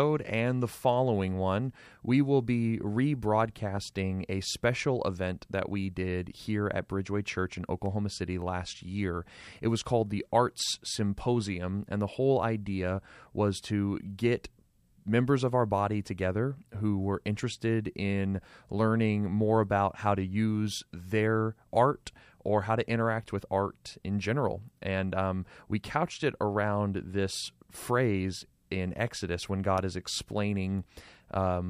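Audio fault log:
No fault can be heard anywhere in this speech recording. Nothing in it calls for an entry in the log.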